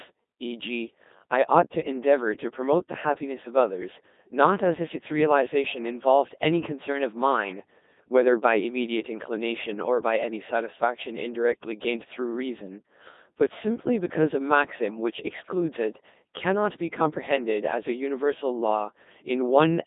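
Robotic, buzzy speech runs through the whole recording, with heavy codec damage and a flat, synthetic tone, confined to a narrow line band of roughly 200 Hz to 3.7 kHz with nothing above 3.8 kHz. The fault is the Codec 2 vocoder. It discards the original waveform, sending only pitch, voicing, energy and a coarse spectral envelope, then rebuilds the voice from sine waves. The heavy damage fits a low rate of around 2.4 kbit/s.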